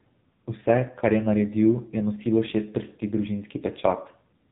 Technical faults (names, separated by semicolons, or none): AMR narrowband mobile codec